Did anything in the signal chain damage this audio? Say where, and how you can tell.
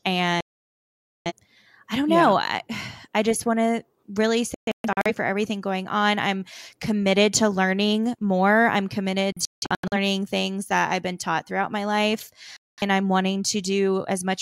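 Yes. The speech mutes four times: a solid gap from 0.41 to 1.32 s, a cluster of short holes between 4.54 and 5.11 s (the longest about 0.13 s), another cluster from 9.32 to 9.96 s (the longest about 0.17 s), and a brief cut from 12.57 to 12.82 s. This is a digital broadcast dropout at the reception stage. The receiver lost the signal or rejected corrupted frames, then muted until clean frames arrived. The gap lengths fit blocks of roughly 43 ms, so the audio sent during each gap is gone.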